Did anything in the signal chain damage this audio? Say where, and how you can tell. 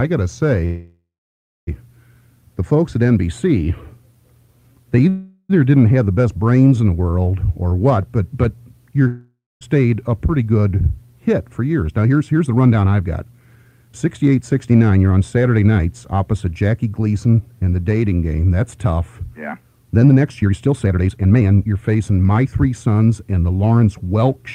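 Yes, the damage is in the network and jitter-buffer stage of a call. At 0.65 to 1.69 s and 5.09 to 5.51 s there are call audio freezes. The last sound is stretched into a fading buzz. In the first one, the buzz decays into about 0.6 s of silence. In the second, at about 0.4 s, it never reaches silence. The audio then resumes exactly where it stopped, which likely means delayed packets drained the jitter buffer. Nothing is skipped, and that separates these from a dropout.

At 9.07 to 9.63 s there is a long network dropout. The same fading continuation appears and settles into about 0.22 s of silence. When the sound comes back, it picks up further on, so roughly half a second of audio has been lost for good. That jump forward is the difference from the freezes, where the content simply waits. Packets that likely never arrived, rather than arrived late, would account for it.

From 11.82 to 17.41 s and from 20.09 to 22.95 s there is jitter buffer speed-up. 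The audio runs fast at an unchanged pitch, about 110% in the first stretch and a more hurried 129% in the second. Each stretch sheds roughly 0.7 s through many tiny pitch-period cuts. This is the receiver draining the excess delay built up by the earlier stalls. Because the pitch holds steady, it can't be a sample-rate mismatch, which would shift pitch along with speed.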